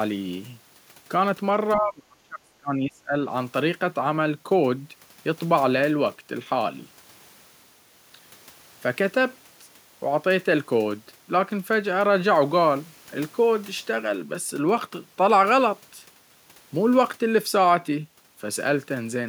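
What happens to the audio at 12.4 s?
At 12.4 s the speech carries on intact, with no dropout, glitch or other fault at that moment.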